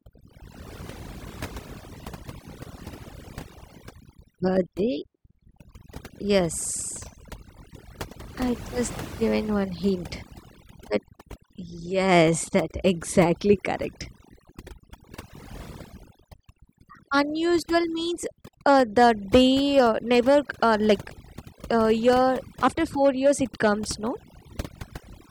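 A speech recording suffers from overdone noise removal for its entire length. The noise reduction was driven too hard: any frequency band sitting close to the estimated noise floor gets pulled down heavily or gated out, so low-level parts of the speech are discarded alongside the noise. Between phrases the background drops and breaks up into flickering tonal specks.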